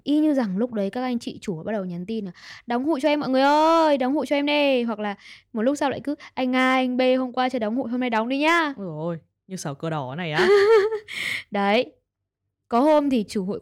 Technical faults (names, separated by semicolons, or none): hard clipping